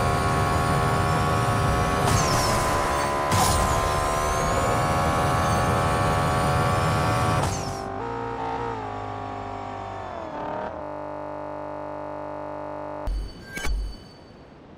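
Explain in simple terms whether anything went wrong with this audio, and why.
A system hang loop occurs from 10.82 to 13.07 s. The computer stalled while the sound hardware kept replaying the same 20 ms slice of audio over a hundred times, so you hear a steady buzz at 50 Hz instead of the sound continuing.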